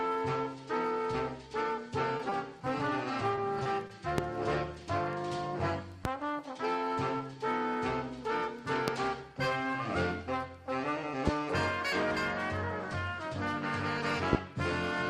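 Short concealed packet loss hits five times, at 2.17, 2.29, 3.35, 3.63 and 3.87 s. Each time about 20 ms of audio misses the decoder, which stretches the preceding sound over the gap and blends back, leaving a brief smear or wobble.

Loud pops follow at 4.18, 6.05, 8.88, 11.27 and 14.33 s, likely voltage spikes from a connector or switch entering the chain. Each is a single sharp pop around twenty to twenty-five decibels above the surrounding sound, which carries on underneath.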